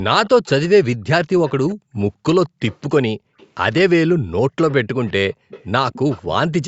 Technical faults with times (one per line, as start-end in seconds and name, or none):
0.26-0.68 echo leak
1.47-1.75 echo leak
2.46-2.82 echo leak
2.49-2.60 background gated by the echo canceller
3.16-3.37 background gated by the echo canceller
3.38-3.47 echo leak
4.70-6.34 echo leak